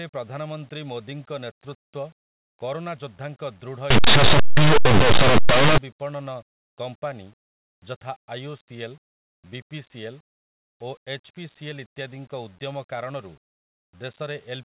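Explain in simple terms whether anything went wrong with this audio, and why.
From 3.90 to 5.78 s, just before "ବିପଣନ କମ୍ପାନୀ", the speech turns into loud, harsh distortion. That's linear audio read as companded: plain 8-bit samples got decoded as mu-law.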